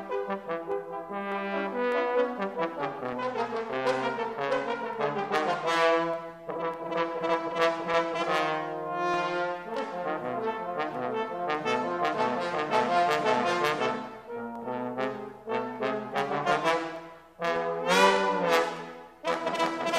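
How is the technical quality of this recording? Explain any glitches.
A click recurs every 0.60 s from 0.11 s to 19.97 s, about thirty in all, wherever there is signal. These are likely clock drift buffer slips: two unsynchronised clocks differing by a few hundred parts per million let a buffer drift until a handful of samples gets dropped or repeated.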